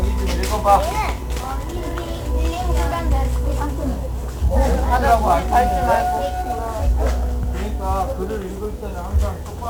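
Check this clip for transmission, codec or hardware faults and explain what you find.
One codec fault is present. Heavy 1-bit DFPWM compression runs throughout. Each sample is a single bit nudging an adaptive level up or down, leaving dense broadband fuzz and crackle with hiss swamping the treble, consistent with roughly 48 kbps. Unlike transform codecs' swirly, band-limited artefacts, this noise covers the whole spectrum.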